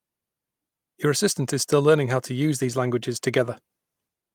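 No technical faults can be heard anywhere in this recording.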